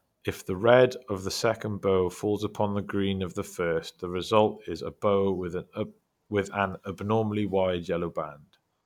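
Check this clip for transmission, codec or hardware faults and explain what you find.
No faults turn up in the speech; the signal stays continuous and stable throughout, with nothing audible to flag.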